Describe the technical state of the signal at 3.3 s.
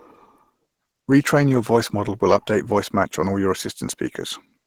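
At 3.3 s you're hearing Opus compression, and it's there for the whole clip, not just that moment. The speech sounds rough and grainy, a bit hoarse, with the top end filled in by noisy texture rather than real detail. That's likely the encoder running in its hybrid mode, coding the lower band as speech and patching the upper bands with folded or noise-filled energy, which fits a starved rate around 16 kbps.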